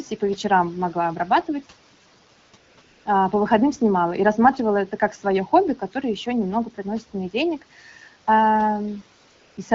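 AMR comfort noise at 2.39–2.53, 2.57–2.77, 2.81–3.05 and 9.27–9.57 s: speech frames stop, and the real background gives way to smooth synthetic hiss that switches in and out.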